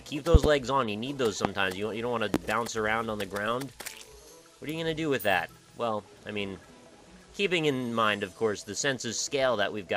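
Right at 0.35 to 0.48 s there's a loud pop, actually a quick double, then single ones at 1.45 to 1.48 s and 2.34 to 2.38 s, each about 20 to 25 dB above the sound, which runs on underneath. Likely a plug, switch or static voltage spike.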